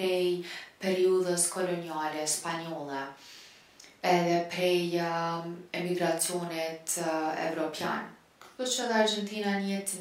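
No technical faults are audible.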